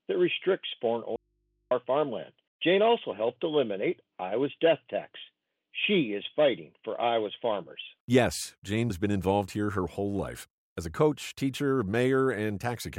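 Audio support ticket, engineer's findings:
Audio dropout to a faint residue, 1.16 to 1.71 s, about 550 ms gone. Cuts out hard mid-flow, nothing but mains hum in the gap, sitting way down, roughly 50 dB under the normal level, then snaps straight back. Not a pause or fade. Likely a connection or input losing the feed briefly while the chain after it stayed live, so the open input just picked up hum until the signal returned.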